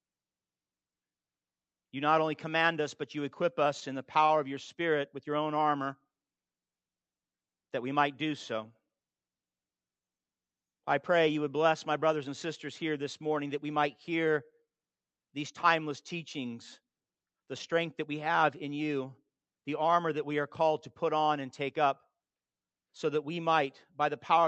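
Between 3.77 and 4.31 s there's a short run of repeated stalls, a stutter. Packets kept turning up late, the jitter buffer ran dry four times, and the receiver stretched the last sound through each gap, about 57 ms in all, longest 32 ms. Nothing's lost, but it drags and hiccups.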